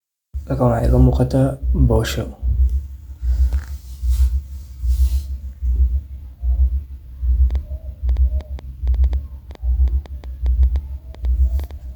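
Likely interference from nearby equipment or a faulty connection starts injecting pulses at 7.51 s, producing a train of clicks until 11.72 s: around twenty similar pops, about 5.2 per second at an uneven pace, ticking over the speech at roughly its own loudness.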